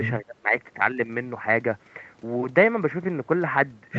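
From 0.22 to 0.55 s, the echo canceller likely mistook double talk for loudspeaker echo and suppressed the speech. The voice sinks by as much as about 30 dB for roughly a third of a second, against the call path's 8 kHz ceiling.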